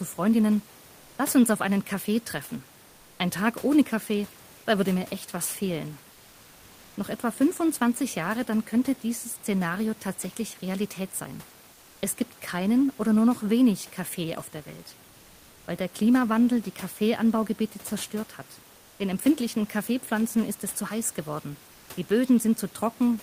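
Comfort noise in place of the background at 2.89–3.19, 11.73–12.01, 15.09–15.67 and 18.73–18.99 s. In these pauses the real room noise turns smooth and featureless, up to about 2 dB quieter. This is likely Opus discontinuous transmission halting, with the receiver synthesising filler noise.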